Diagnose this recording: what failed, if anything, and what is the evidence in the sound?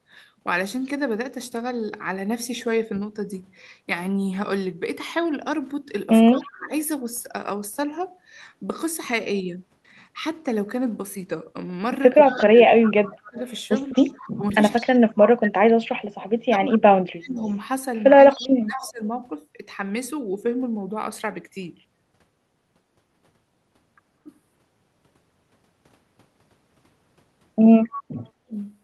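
Speech suppressed in double talk, in the call processing stage: the speech level dips by about 25 to 35 dB at 6.31–6.71, 12.48–13.38, 14.36–17.39, 18.32–19.01 and 28.46–28.52 s. The waveform shows abrupt gouges in the envelope, and the spectrogram shows faded columns. This is likely an echo canceller turning down its own talker along with the loudspeaker echo while they overlap.

Echo leak, also in call processing: a faint copy of the speech trails it by 207 ms, about 20 dB down, at 12.27–14.89, 16.21–18.92 and 27.93–28.02 s. On a spectrogram the harmonic patterns repeat, shifted later and weaker. This is likely loudspeaker echo the canceller failed to remove.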